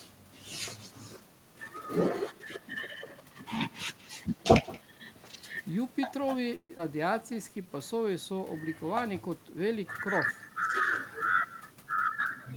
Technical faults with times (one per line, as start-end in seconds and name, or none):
0.00-12.56 echo with no canceller
6.55-6.71 call audio freeze
6.77-6.81 skip ahead
6.95-8.40 jitter buffer slow-down